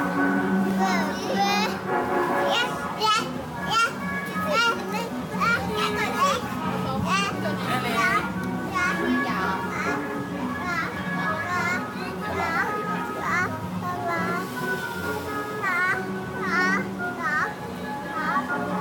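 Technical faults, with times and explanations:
0.71 s, repeated buffer: a tiny slice of about 1.45 ms plays twice because fresh audio arrived late, which fits a 64-sample buffer. So brief a repeat is heard as a click, showing as a hard waveform discontinuity and a thin vertical broadband line on a spectrogram.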